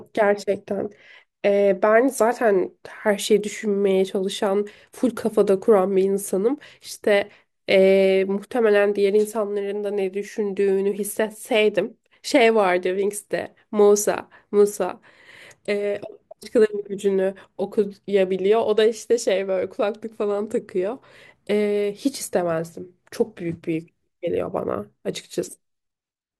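No technical faults can be heard.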